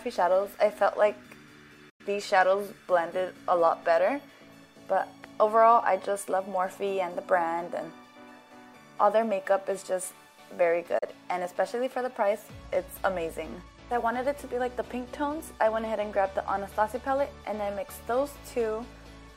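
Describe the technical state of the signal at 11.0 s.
At 11.0 s the signal suffers a digital broadcast dropout, from 10.98 to 11.03 s. The receiver lost a frame or found it corrupt and muted. The sound fades out over about 8 ms and leaves a hole of about 32 ms. That fits one lost frame. What was sent then is gone.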